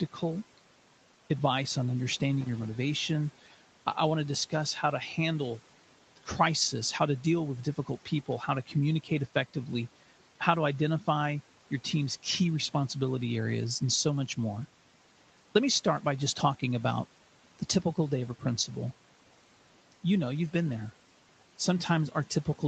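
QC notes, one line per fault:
2.41–2.64 s, loose connector crackle: just after "advice on", a worn contact makes and breaks, chopping the signal into an irregular scratchy burst for about 0.23 s. The waveform shows ragged gaps and spikes, and the spectrogram shows scattered broadband vertical streaks reaching the 8 kHz top of the call band.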